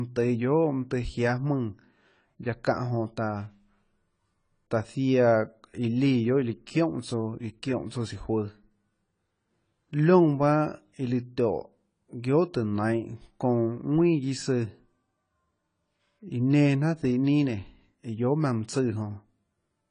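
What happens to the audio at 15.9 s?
At 15.9 s the speech sounds dull and smeared, with a warbly, fizzy edge on sibilants and nothing above 10 kHz, as it does throughout the clip. The likely cause is AAC compression at a low bitrate, around 24 kbps, which lowers the cut-off and thins the spectrum.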